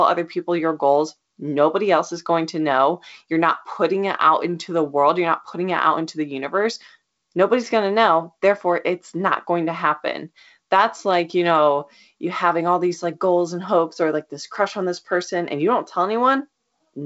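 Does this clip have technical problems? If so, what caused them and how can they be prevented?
No technical problems detected.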